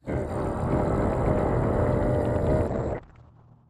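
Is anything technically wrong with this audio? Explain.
Yes. From 2.69 s to the end at about 3.69 s, the sound turns rough and watery and loses its top end, now stopping near 8 kHz. This is a call bitrate drop: the encoder was given far fewer bits, consistent with falling from about 64 kbps to 8 kbps, so it coded coarsely and cut the high band.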